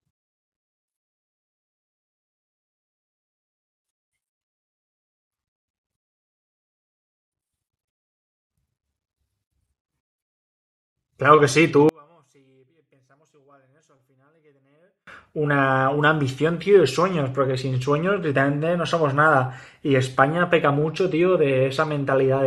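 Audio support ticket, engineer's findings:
Speech nearly vanishes 11.89–15.07 s, about 39 dB down on mono sum. Likely one channel inverted: identical centred content cancels when both channels combine.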